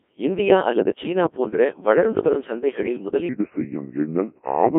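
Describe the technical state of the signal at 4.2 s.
At 4.2 s the speech is passing through the Codec 2 vocoder, as it does throughout. At about 1.6 kbit/s the decoder rebuilds the sound from pitch, voicing and envelope data using sine waves, so the tone is robotic and buzzy rather than the smeared, warbling texture of a waveform codec. The line band runs roughly 250 Hz to 3.5 kHz.

The moment also falls within a section at the wrong speed, running from 3.29 s to the end. Playback runs at 0.784 times the original rate, so the speech is slower and deeper, roughly four semitones down. Tempo and pitch drop together, which sets it apart from a pitch shifter that changes pitch alone. The likely cause is playback against a mismatched clock.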